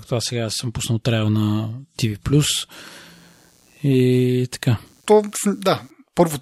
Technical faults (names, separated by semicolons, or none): computer activity noise